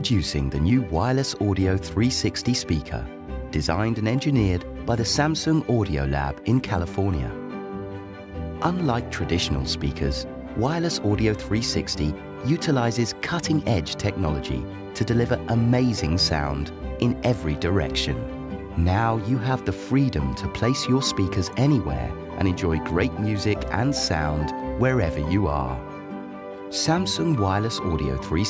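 No technical faults are audible.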